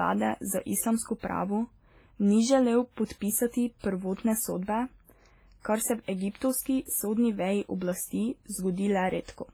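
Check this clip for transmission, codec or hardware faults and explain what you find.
The speech shows two related codec faults: heavy transform-codec damage across the whole recording, and four short bursts of pre-echo.

WMA compression, throughout: The speech has a washy, ringing quality. A thin hiss rises and falls with the signal, and the higher detail sounds hollowed out where weak spectral lines have been zeroed. The likely cause is a WMA-style transform encoder running at a low bitrate that fits roughly 24 kbps. Each long block's quantisation noise is smeared over tens of milliseconds. Broadband noise stays steady during pauses. This hiss breathes with the speech, which tells it apart.

Pre-echo, at 1.19 to 1.23 s, 3.05 to 3.10 s, 3.79 to 3.84 s and 6.02 to 6.08 s: The first comes just after "za islamsko" and the second just after "ni želel". In each case a short hiss appears 45 to 55 ms before a sharp onset, and the attack itself sounds softened. 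The codec spreads noise sized for the loud attack evenly through the block, so it also lands in the quiet moment before it. A dropout or click would follow the event. This noise arrives ahead of the attack, which sets it apart.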